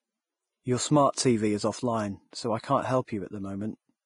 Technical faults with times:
0.00-4.05 Vorbis compression
2.31-2.33 pre-echo

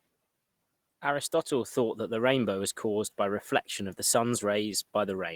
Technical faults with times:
none

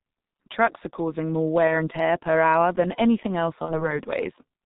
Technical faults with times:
0.00-4.65 G.723.1 codec
1.67-1.72 VoIP packet loss concealed by the speech codec
3.65-3.93 VoIP packet loss concealed by the speech codec

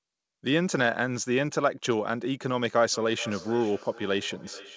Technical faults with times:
2.92-4.76 feedback echo between two devices

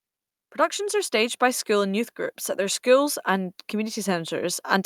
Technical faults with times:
0.76-4.86 automatic gain rising

